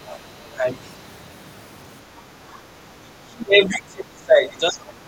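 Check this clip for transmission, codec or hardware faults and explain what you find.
Two kinds of echo-canceller fault appear in this speech clip, one near the start and one that runs to the end.

Other side's voice leaking through, 0.07 to 0.17 s: a faint second voice sits well below the main talker for a brief moment. The likely cause is the talker's device playing the far end on its loudspeaker, with the echo canceller leaving a small residue of that sound in the microphone signal, which then travels back as a quiet, stray trace.

Speech suppressed in double talk, 0.38 to 0.65 s and 3.01 to 5.07 s: the talker's level sinks while another voice is active. The first dip is moderate and lasts only a fraction of a second. The second is much deeper and covers about two seconds, running to the very end. The likely cause is both sides speaking at once, so the canceller could not tell the talker apart from the loudspeaker echo and attenuated everything it picked up.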